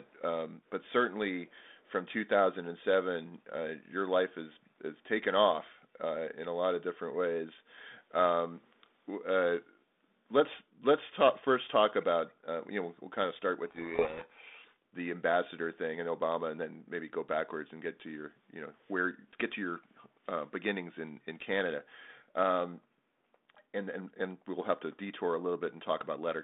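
Echo leak, from 0.66 to 0.92 s and again from 1.51 to 1.91 s: a very faint, delayed copy of the speech comes back about half a second (501 ms) after the original, far below the direct voice. This is likely a loudspeaker phone at the far end whose echo canceller left some of what its microphone picked up, so that residue was sent back down the line as brief scraps.

Codec payload misread, from 13.66 to 14.76 s: for just over a second the speech is buried in harsh distortion. The receiving decoder is taking the G.726 code words in the wrong bit order, so each sample's difference value is decoded from scrambled bits and the adaptive prediction is steered by garbage. Around it, the light codec character and the narrow band of roughly 200 Hz to 3.6 kHz fit 32 kbit/s G.726.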